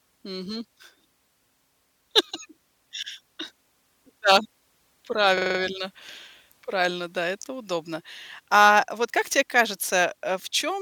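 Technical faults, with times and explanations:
5.38–5.59 s, system hang loop: a rapid stutter as one 42.7 ms slice of speech repeats exactly five times at 23.4 Hz. The system stalled while the sound hardware kept replaying its ring buffer, which fits a 2048-sample buffer. Almost no audio was lost.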